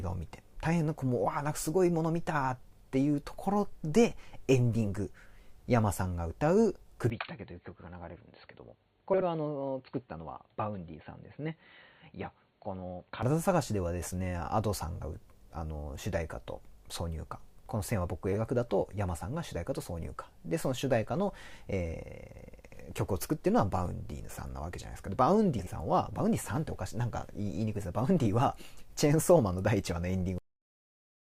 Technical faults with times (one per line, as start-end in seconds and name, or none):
7.10-13.23 input switched to a poorer device
9.13-9.23 frames out of order
18.33-18.37 frames out of order
25.59-25.69 frames out of order
30.38-31.39 cut-off end